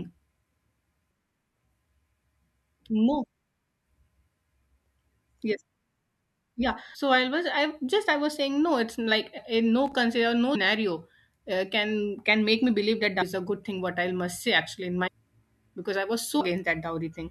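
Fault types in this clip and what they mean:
Compressed frames skipped: whole blocks of the encoded stream never reach the output, so the speech jumps forward, usually by a fraction of a second and once, near 15.1 s, by nearly three-quarters of a second. Each join is a soft smeared blip, not a click, consistent with frames of about 26 ms.
Loose connector crackle: a worn or dirty contact briefly makes and breaks, chopping the signal into a short irregular burst of scratchy crackle. It is heard from 9.86 to 9.93 s, shortly after "a no", and lasts well under a tenth of a second.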